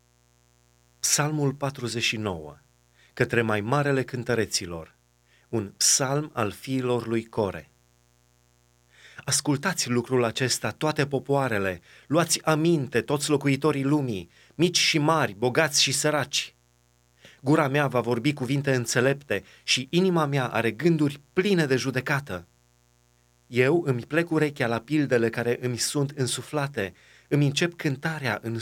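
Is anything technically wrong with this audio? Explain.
Yes. A steady, raspy mains buzz runs under the speech for the whole clip, sitting roughly 40 dB below it. Its base is 60 Hz, with a dense stack of harmonics climbing to several kilohertz, which gives it an edge rather than a smooth hum. It comes from sharp switching spikes, of the kind a dimmer, a rectifier or a missing shield lets into the signal path, arriving twice per mains cycle, 120 times a second.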